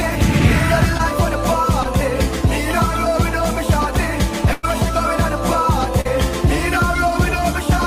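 Brief smears interrupt the sound at 0.97 to 1.01 s and again at 1.83 to 1.87 s. These are short concealed packet loss. About 20 ms of audio failed to reach the decoder in time each time, and the receiver covered the hole by stretching what it had just played, then cross-fading back into the real signal. That patched stretch of roughly 15 to 18 ms is what the ear catches as a tiny wobble.

From 4.53 to 4.65 s the sound turns into a held, fading buzz or hiss and then jumps ahead. This is a burst of packet loss: about 100 ms went missing in a row, too much for a clean patch. The receiver kept extending the last sound for nearly 100 ms while turning it down, so the material that belonged in that gap is simply gone.

A further smear at 6.01 to 6.07 s is another short concealed packet loss, this time about 40 ms long.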